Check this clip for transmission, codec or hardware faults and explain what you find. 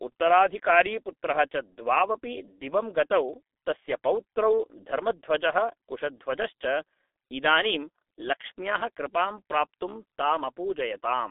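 The speech passes through the G.723.1 codec throughout, fitting a rate near 6.3 kbit/s. It codes 30 ms frames with a slowly updated voice model inside a 250 Hz to 3.6 kHz band, nothing above 3.8 kHz. Heavy damage leaves it muffled and hoarse with blurred consonants. A plain telephone filter would narrow the band without that hoarseness.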